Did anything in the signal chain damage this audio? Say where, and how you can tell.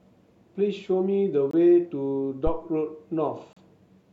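Yes. Two hard-edged silent holes cut the speech, at 1.51 to 1.54 s and 3.53 to 3.57 s, about two seconds apart. This is a gap between stream segments at the network or playback stage: mistimed segment boundaries added 22 ms and 35 ms, filled with silence.

A deep phantom power thump sits at 2.47 to 2.62 s, decaying in about 33 ms. It arises in the analogue wiring: supply voltage switching on a live input sends a step through the coupling capacitors, producing a low-frequency pulse.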